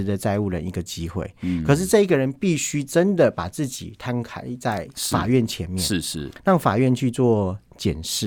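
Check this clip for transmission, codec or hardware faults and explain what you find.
No fault can be heard in the speech, and the signal remains continuous and steady throughout.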